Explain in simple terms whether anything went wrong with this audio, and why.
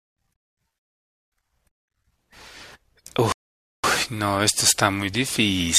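Rebuffering stall, twice: at 0.79 s and 3.32 s the speech drops to silence for about half a second, then picks up exactly where it stopped. The player ran out of downloaded audio and waited for more, so nothing is missing, only time is added.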